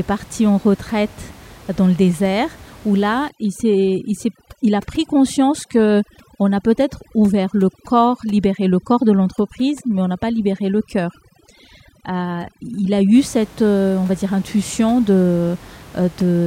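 From 3.29 s, just after "où là", to 13.15 s, before "cette euh on va", overdone noise removal pulls bands near the room noise, about 24 dB below the speech, to near silence with twinkling specks. Unlike codec smearing, quiet parts of the voice vanish.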